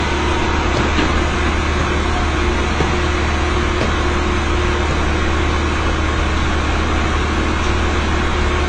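AAC compression, throughout: everything above 9.4 kHz is missing and the sound is dull and smeared with a warbling texture, likely from AAC-LC at a low bitrate near 24 kbps.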